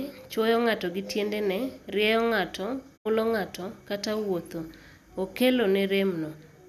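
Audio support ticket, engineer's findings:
Digital broadcast dropout, 2.96–3.07 s. Receiver lost sync or rejected corrupt frames and muted until valid frames resumed. Speech fades out over about 20 ms after "gi tiendene rieyo ng'ato", roughly 72 ms missing, consistent with three lost frames, resumes at "ng'ato kata".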